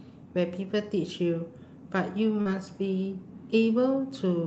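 At 2.41 to 2.47 s the speech briefly smears and wobbles, as if the sound is stretched for a moment. This is short concealed packet loss: about 40 ms of audio arrived too late, so the receiver extended the preceding sound before blending back into the real signal.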